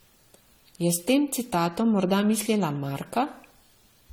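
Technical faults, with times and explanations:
Throughout, generation loss: the speech has a swirly, hollow smear and blurred attacks that build beyond what one lossy pass would leave, yet content still reaches about 20 kHz, so this is not a single heavily band-limited encode. The likely cause is about seven rounds of lossy re-encoding, consistent with AAC-LC near 64 kbit/s, each pass quantising on a shifted frame grid so noise and spectral holes accumulate.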